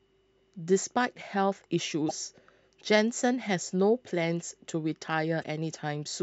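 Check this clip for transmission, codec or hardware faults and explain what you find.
Two short glitches break into the speech, both from damaged data in a compressed stream. From 2.05 to 2.11 s, and again from 5.40 to 5.45 s, the sound gives way to a brief glitch lasting about 50 to 60 ms. At each point the compressed data was corrupted, so the decoder could not read those frames correctly, lost sync and had to hunt for the next valid frame header before clean audio resumed.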